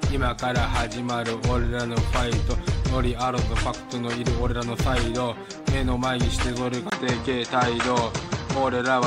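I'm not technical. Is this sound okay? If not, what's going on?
No. At 6.90 s there's a brief gap and the sound turns duller, with a faint new background noise, most likely an input switched to a poorer device. That device misses the highest sounds, above about 8.5 kHz, though loudness stays roughly unchanged.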